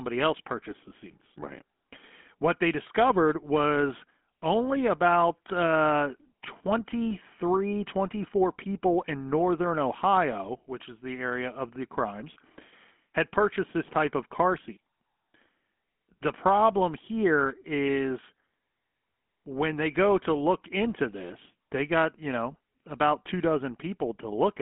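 GSM full-rate codec coding runs through the whole recording, from start to finish. The codec rebuilds the speech from a vocal-tract model excited by evenly spaced pulses, keeping only a thinned-out excitation signal, a coarseness that fits a 13 kbps rate. The result is a plainly audible buzzy, gravelly roughness on every voiced sound. The band is narrowed to a telephone-like 200 to 3400 Hz, with nothing at all above 3.8 kHz, so sibilants sound dull and boxy.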